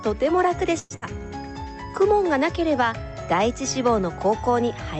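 From 0.79 to 0.93 s there is a call audio freeze, likely from packets stalling so the jitter buffer emptied. The last sound is stretched into a fading buzz or hiss for about 108 ms, ending in a brief silence. Then the audio resumes exactly where it stopped, about 108 ms later than before, with nothing skipped.

At 0.96 to 1.05 s a burst of packet loss follows, and it differs from the freeze because audio actually disappears. About 56 ms of concealment, the last sound held and turned down, covers the gap, and when sound returns roughly 60 ms of the original has been jumped over.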